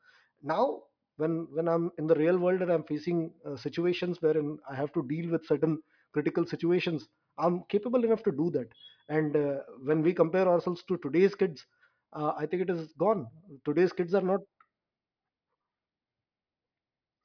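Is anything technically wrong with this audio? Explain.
No, nothing in this speech recording points to a technical fault.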